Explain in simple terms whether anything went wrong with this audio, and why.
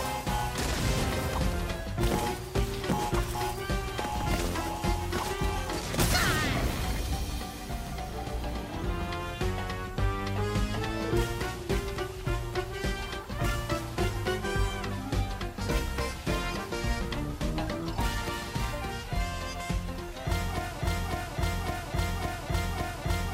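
Something in the playback or streaming chain likely stalled at 20.81 s and kept replaying the last fragment it held. That is a broken-record loop: a 0.56-second piece repeats five times, back to back, until the end, and whatever should have followed is lost.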